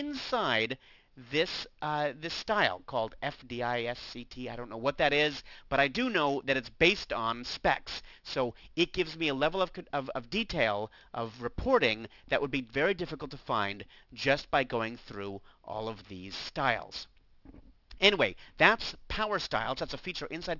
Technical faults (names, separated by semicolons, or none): aliasing